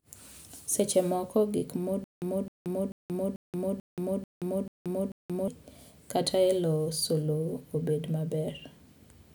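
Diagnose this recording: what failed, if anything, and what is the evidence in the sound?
Playback stage: after "moko gik", stutter with silent gaps from 2.04 to 5.48 s. A 261 ms burst repeats eight times with 179 ms silences, likely a stalled buffer replaying one fragment.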